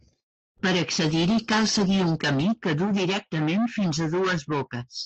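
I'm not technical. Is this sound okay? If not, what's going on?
No. From 0.37 to 0.50 s there is a call audio freeze: the sound hangs and then goes almost silent for about a tenth of a second before carrying on. This likely happened because network packets arrived late and the receiver ran out of audio to play, so a pause was inserted and nothing was lost.

At 0.58 to 0.61 s there is a short concealed packet loss. A tiny piece of the audio never arrived, and the receiver patched the hole by stretching the sound just before it. The result is a quick smear or wobble.

From 1.06 to 2.54 s there is a call bitrate drop. The connection seemed to weaken, so the call squeezed the audio into much less data. For about 1.4 s of that stretch the speech sounds rougher and watery, then it clears up again.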